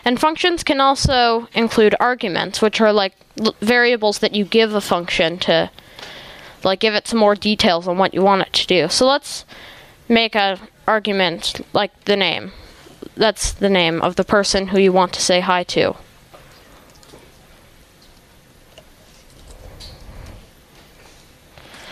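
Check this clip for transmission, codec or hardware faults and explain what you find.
One fault runs through the whole clip: gain pumping. The level breathes continuously, a swing of around 15 dB. The likely cause is input gain set far too high, with a fast limiter or compressor clamping down on each peak and releasing in the pauses. Loud and quiet passages end up squashed close together. On a waveform the envelope looks flattened, with noise-floor bulges between peaks. A spectrogram shows the background band brightening in gaps and dimming under each loud event.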